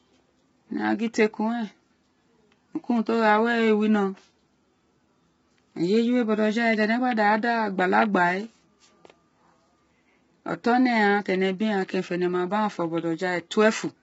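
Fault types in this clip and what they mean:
Low-delay AAC compression: the speech sounds rough and grainy for the whole clip, with a noisy haze between the voice harmonics and nothing at all above 7.7 kHz. The likely cause is a low-delay AAC codec such as AAC-ELD, built for video calls. Its short frames cannot separate closely spaced pitch harmonics cleanly and use bits less efficiently. The heavy damage points to a bitrate of around 16 kbps.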